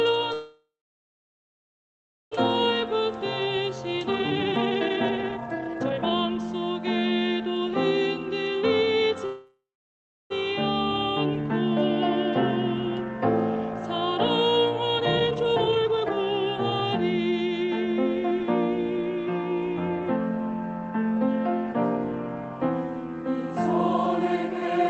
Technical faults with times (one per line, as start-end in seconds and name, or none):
0.33-2.33 call audio freeze
2.63-6.38 jitter buffer speed-up
8.43-9.15 jitter buffer speed-up
9.26-10.32 call audio freeze
14.97-18.41 jitter buffer speed-up